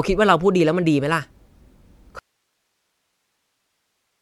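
At 2.19 s the speech just drops out mid-flow and never comes back: an audio dropout to a faint residue, with only hiss about 55 dB down to the end. Likely the signal feed was lost while the path after the break stayed live.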